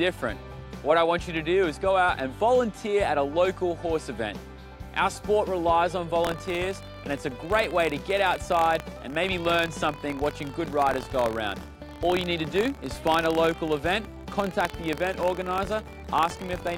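Buffer tearing runs from 6.22 s to the end at 16.77 s. Writer and hardware have slipped out of step, so every period carries a tiny sliver of audio about 50 ms old, hard-joined on both sides. This produces a 43.1 Hz robotic buzz that fits a 1024-sample buffer.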